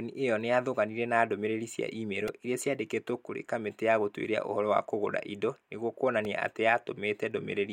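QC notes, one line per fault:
2.28 s and 6.25 s, repeated buffer: a few milliseconds of speech are replaced by one tiny segment replayed back to back, which fits a 64-sample buffer of about 1.45 ms. Unlike a dropout, there is no silent gap, just a brief buzz around 690 Hz.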